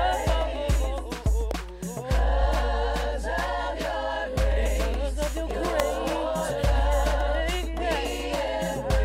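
At 1.51 s and again at 5.8 s, a sharp snap sits on top of the audio: an electrical switching spike, likely a nearby switch or discharge arcing onto the line. The second is considerably louder, reaching about -5 dBFS.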